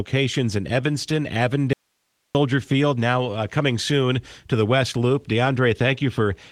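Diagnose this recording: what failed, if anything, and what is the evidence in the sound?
The signal feed likely broke somewhere before the encoder, since the Opus-coded speech resumes cleanly. From 1.73 to 2.35 s, about 0.62 s, the speech cuts out abruptly, leaving only hiss roughly 50 dB down: an audio dropout to a faint residue, not a pause.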